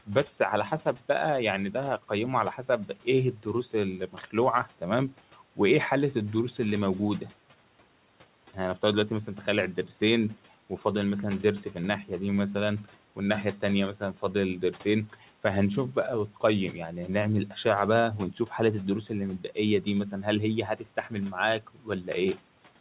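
From 0.06 to 1.02 s, 1.73 to 5.58 s, 12.84 to 15.24 s, 15.95 to 16.74 s, 17.48 to 17.65 s, and 19.09 s to the end, there is speech cut by the noise suppressor. It mistakes soft consonants and word tails for noise, pulling them down by up to about 13 dB so they sound swallowed. Unlike packet-loss dropouts, nothing vanishes abruptly and the low room noise, about 23 dB below the speech, dips along with them. The whole band stops near 4 kHz, which fits a G.711 call path.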